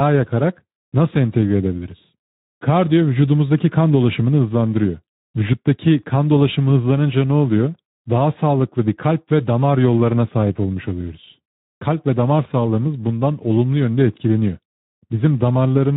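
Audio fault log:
throughout, Speex codec: the speech sounds plainly hoarse and noisy, because this CELP coder has too few bits for the excitation, consistent with roughly 11 kbps.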